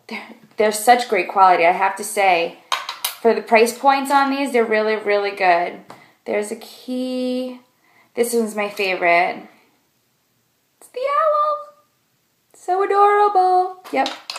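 No technical faults can be heard anywhere in this recording.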